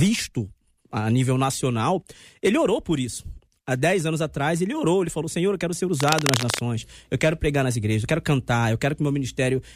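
A worn connector likely shifted from 6.00 to 6.59 s, just after "eu quero ser", causing cable scratch noise: dense, uneven scratching nearly as loud as the speech.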